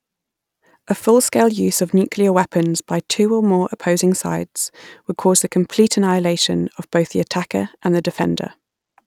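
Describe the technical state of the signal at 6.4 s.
At 6.42 s, right after "would cause the complete", there's a bit error spike: one flipped bit throws a single sample to about -10 dBFS, giving a sharp, broadband tick.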